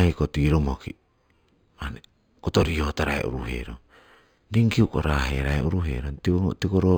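Imaging from linear upsampling runs throughout: crude interpolation, pointing to an 11 kHz source, leaves faint mirrored images at 5.5 to 11 kHz, so sibilants shimmer metallically.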